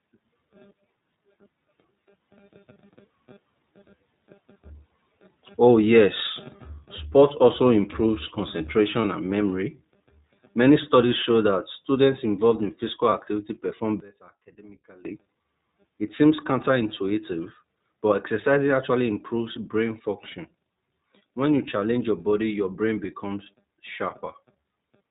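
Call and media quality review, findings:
iLBC codec, whole clip: speech plainly band-limited, nothing above 4 kHz, with a rough, slightly synthetic texture. Narrowband iLBC coding each frame's excitation independently; the damage level fits the 15.2 kbps mode with 20 ms frames.

Lost iLBC frames, 9.02–9.05 s and 13.10–13.13 s: brief held, faintly buzzy vowel-like patch, then speech resumes immediately. One 20 ms frame missing each time; the decoder repeats the last pitch cycle mixed with noise. Independent frames allow instant recovery.

One channel inverted, 14.00–15.05 s: speech drops by about 21 dB to a faint residue, then returns. Likely one stereo channel with reversed polarity, so the centred voice cancels on mono summing and only the inter-channel difference remains.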